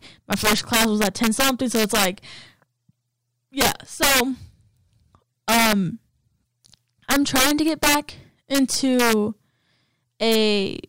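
Speech with integer overflow at 0.32–2.05, 3.61–4.20, 5.49–5.73, 7.11–7.95, 8.55–9.13 and 10.32–10.35 s, driven about 1 to 8 dB past full scale. Loud peaks wrap to the opposite sign, so the sound cracks violently instead of flattening as clipping would.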